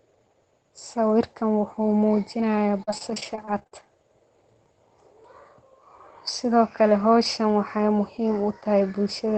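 Speech over a call link, with repeated packet loss (robotic sound) from 2.83 to 3.73 s. A rapid string of short dropouts, none longer than about 41 ms, gets patched by stretching the previous sound, so roughly a quarter of that stretch turns choppy. The call path's top end stops around 8 kHz, which fits Opus at about 20 kbps.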